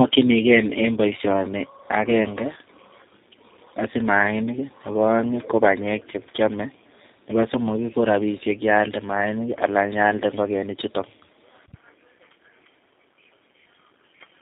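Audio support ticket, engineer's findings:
Tandem speech coding, throughout: rough, warbly, muffled, nothing above 3.7 kHz. Points to two speech codecs in series, GSM full rate then G.729A, each re-encoding the previous coder's artefacts.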